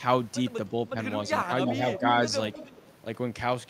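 From 1.42 to 1.53 s the speech dips by about 10 dB. This is speech suppressed in double talk. Both ends are likely talking at once. The echo canceller cannot tell the near talker from the loudspeaker echo, so it turns everything down. Two shorter dips follow, at 1.72 to 1.82 s and 1.98 to 2.04 s. Each is shallower, about 5 dB. The speech sags briefly while the far side talks.

Echo leak starts at 1.66 s and runs to 1.75 s. A second stretch runs from 1.91 to 2.23 s. Both carry a copy of the speech delayed by 310 ms, only about 5 dB below the direct sound. The far end is likely on a loudspeaker. Its canceller lets part of the pickup through and sends it back. A weaker leak, about 15 dB down, follows from 2.53 to 2.91 s.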